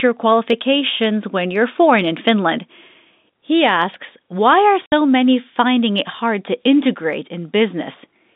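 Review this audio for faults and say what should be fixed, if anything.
Packet loss filled with silence: two consecutive packets, which fits a 30 ms packet size, never reached the receiver, and instead of concealing the gap it played nothing. The speech cuts out for 60 ms from 4.86 s to 4.92 s, with abrupt edges at both ends, while the narrow G.711 telephone band either side of the hole stays intact. To prevent it, enable packet loss concealment and a jitter buffer at the receiver.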